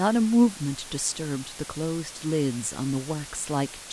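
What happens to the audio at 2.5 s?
At 2.5 s the speech sits under a loud, steady hiss, even in texture and without any crackle or harsh distortion, and it is present throughout the clip rather than only at that moment. This is low bit depth with dither: the audio carries only about 6 bits, and random dither noise was added before each sample was rounded. That turns the coarse rounding error into constant white noise, here sitting roughly 15 dB below the speech.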